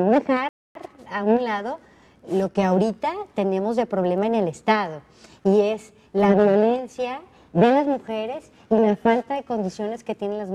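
At 0.49 s the audio halts and falls to silence until 0.75 s, a rebuffering stall. The player exhausted its downloaded buffer and paused until more data arrived, adding about 0.26 s to the playback. What separates this from a dropout or packet loss is the restart: the sound picks up at exactly the point where it stopped, with nothing skipped or smeared over, so the stream's timeline is stretched rather than cut.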